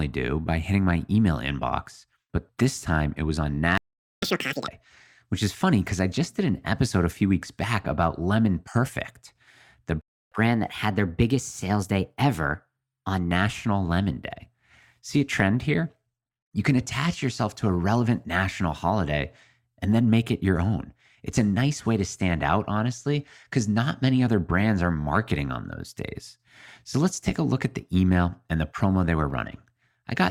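At 3.78 s the speech just cuts out for about 0.45 s, a playback stall, likely the player running dry or getting blocked. From 4.23 to 4.68 s it's a catch-up at higher speed. The backlog plays at double speed, so pitch jumps up close to ten semitones and sounds chipmunky before snapping back. The same thing happens again, more gently. At 10.01 s there's a second stall of about 0.3 s, again likely a data or thread hiccup. Then from 10.32 to 13.32 s playback runs at 1.1 times speed, roughly a semitone and a half sharp, which sounds slightly rushed and bright until it settles.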